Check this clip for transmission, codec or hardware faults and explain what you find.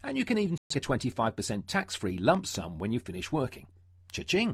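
Two faults are audible: a digital broadcast dropout and a loud pop.

The digital broadcast dropout runs from 0.58 to 0.75 s. The receiver stopped getting usable frames and muted its output. The sound cuts to silence and comes back further along, so that stretch of programme is gone, not delayed. The missing audio totals about 128 ms, which fits roughly three lost frames. It is heard as a short, clean hole in the sound.

The loud pop falls between 2.35 and 2.57 s. It is two sharp pops, a little apart, sitting a few dB above the sound. The audio carries on underneath without a break. The likely cause is a sudden voltage step or pulse entering the chain, from a plug, switch, static discharge or driver glitch. The circuits downstream shape that pulse into the brief percussive clicks heard here.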